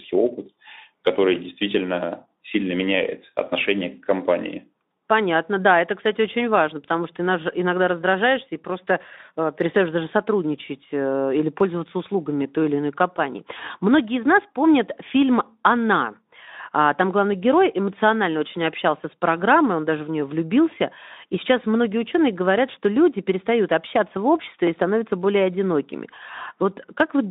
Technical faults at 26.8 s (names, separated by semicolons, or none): none